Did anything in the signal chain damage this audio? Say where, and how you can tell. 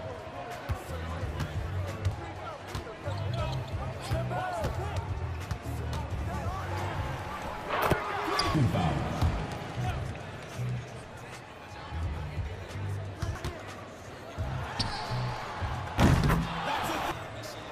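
Yes, in the codec. Damaged data in the compressed stream causes blips at 2.12, 6.95, 11.03 and 13.35 s. The decoder briefly loses frame sync.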